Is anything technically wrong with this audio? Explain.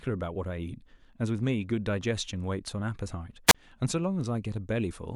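Yes. At 3.47 to 3.55 s the speech has a wireless microphone squelch dropout. The radio link fades, so hiss briefly rises. Then the receiver's squelch mutes the output for about 35 ms, leaving a hole of near silence. The speech then returns.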